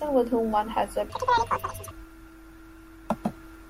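A clock or rate mismatch in playback or editing likely caused a section at the wrong speed in this speech clip. From 1.10 to 1.91 s the audio runs at twice its recorded speed, so timing and pitch shift together. The voice jumps up by roughly ten semitones and sounds chipmunk-like and rushed, and the syllables in that stretch are squeezed into half their natural duration.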